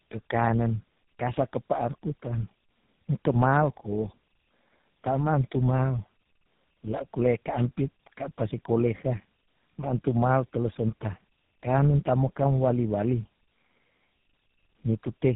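Throughout the speech, tandem speech coding leaves the sound rough, muffled and warbly, with a harshness that points to about three low-rate speech coders in a row, the last of them likely GSM full rate. Each coder re-encodes the previous one's distortion, so errors compound. On a spectrogram, nothing appears above 3.8 kHz, and the formant bands look smeared and blotchy. In the waveform, the envelope looks coarse rather than smooth.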